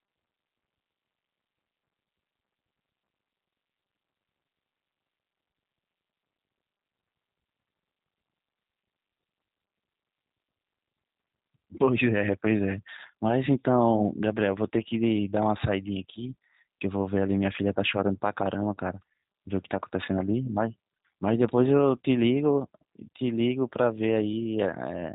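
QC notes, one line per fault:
Throughout, G.729 codec. Nothing passes above about 3.8 kHz, so the speech sounds narrow and muffled. The roughness is plainly audible, with a buzzy, synthetic edge. The speech is rebuilt from a few pulses per frame, which fits an 8 kbit/s G.729-type coder.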